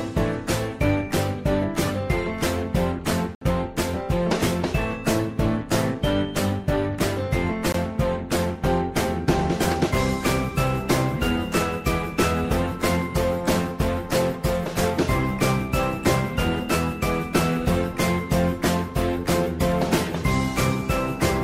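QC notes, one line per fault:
3.35 to 3.41 s, block of digital silence: the sound drops to silence for 64 ms and returns with no fade, leaving a brief hole. The hard edges and dead-flat gap set it apart from a faded or concealed dropout.
7.72 s, block of digital silence: a 21 ms cut whose length fits a 1024-sample buffer that was not filled in time.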